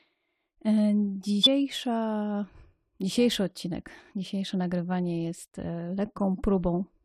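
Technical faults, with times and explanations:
1.43 to 1.47 s, compressed frames skipped: about a tenth of a second of audio is lost, so the sound jumps ahead.
2.95 s to the end, periodic clock jitter: the converter clock wobbles at around 300 Hz, surrounding every component with sidebands at that spacing, giving a rough metallic edge strongest on high frequencies.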